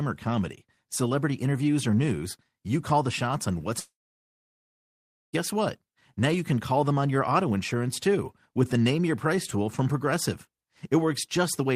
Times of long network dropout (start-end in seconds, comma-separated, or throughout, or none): 3.79-5.35